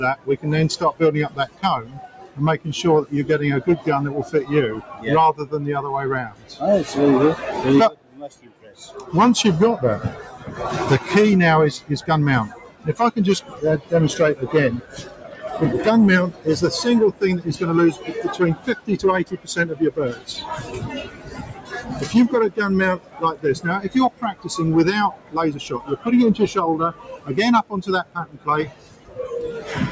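A stage in the chain was overdriven by about 13 dB, so hard clipping flattens the peaks throughout, adding a harsh, gritty fuzz to every loud moment. A speech noise suppressor was left running on this non-speech material. It treats steady content as noise, so level swings by about 20 dB and held sounds pump and thin. The same noise suppressor also turned sound down from 0.16 to 2.66 s, 3.78 to 6.61 s, 7.9 to 8.96 s, 10.18 to 10.49 s and 11.79 to 29.69 s. Sustained parts and decays sink by up to about 14 dB (about 8 dB in the short 10.2 s dip). The call microphone processing limits the top end to 8 kHz.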